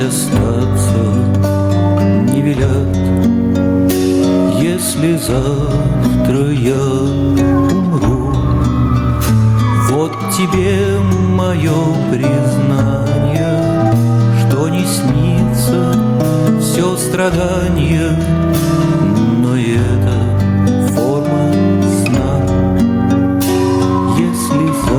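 Gain pumping runs throughout: the gain ducks about 15 dB under loud sounds, likely excessive gain driving a fast limiter.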